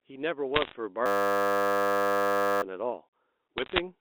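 From 0.54 to 0.74 s a scatter of sharp ticks crackles over the speech. These are bit errors on a digital phone line, with flipped bits corrupting individual samples at a rate just under 1 percent. From 1.06 to 2.62 s the speech gives way to a steady 100 Hz buzz. This is a system hang loop: the computer froze while the hardware replayed one 10 ms buffer about 156 times, losing roughly one and a half seconds of audio. From 3.58 to 3.80 s the same tick-like crackle returns, more bit errors riding on the band-limited G.711 telephone sound.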